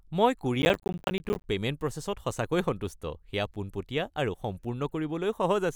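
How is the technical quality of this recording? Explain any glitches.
The recording has one glitch, a processor overload crackle from 0.62 to 1.44 s. The processor fell behind and missed dozens of buffer deadlines again and again, with buffers of around 10 ms. Each miss dropped in a short hard-edged silence, so the speech turns gritty and torn with rapid crackle until the load eases.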